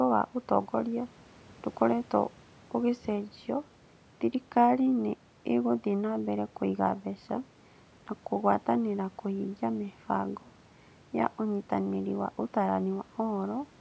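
The speech carries no technical faults, with the call microphone processing leaving nothing above 8 kHz and the room's background noise sitting about 31 dB below the speech.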